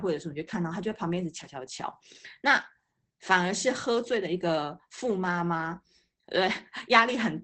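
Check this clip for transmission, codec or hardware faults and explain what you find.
One codec fault runs through the whole clip: Opus voice compression. SILK linear-prediction coding in wideband mode removes everything above about 8.6 kHz, and its coarse excitation coding leaves the speech plainly muffled, hoarse and slightly robotic, which fits a bitrate near 12 kbps.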